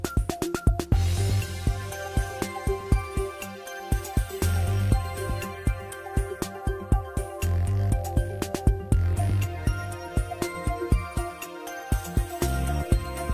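No technical faults are audible.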